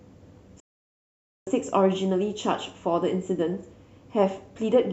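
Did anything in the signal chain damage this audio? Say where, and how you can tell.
Yes. The damage happened at the broadcast reception stage: a digital broadcast dropout, where the receiver stopped getting decodable frames and muted its output until valid ones returned. The speech snaps to silence at 0.60 s with only a very brief fade of about 3 ms and comes back at 1.47 s, leaving a gap of roughly 0.86 s. That is consistent with a run of several dozen corrupted or missing frames. Whatever was transmitted during that gap is gone.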